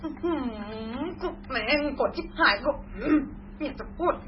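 Throughout the speech, the sound is watery and swirly, with nothing above 5.6 kHz. It is likely heavy MP3 compression, and the damage fits a very low bitrate near 16 kbps.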